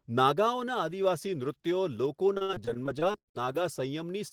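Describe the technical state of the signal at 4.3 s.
At 4.28 to 4.33 s there is a short stall from a late packet. A packet arrived late and the jitter buffer ran dry. The receiver held the last speech sound for about 30 ms, then resumed with nothing lost. The sound drags briefly, with a faint buzz or dip.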